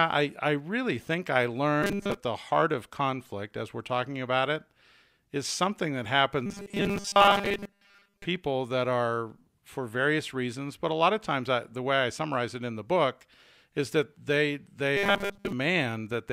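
Speech clip in which audio likely arrived too seldom, so short buffers of about 5 ms were replayed in place of most of the missing audio. The result is robotic sound from repeated short buffers: a rigid 200 Hz buzz at 1.83–2.17 s after "I really think I", 6.46–8.25 s after "is something that", and 14.97–15.52 s after "is that they they".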